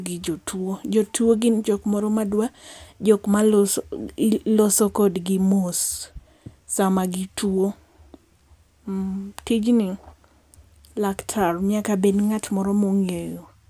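No technical faults are audible.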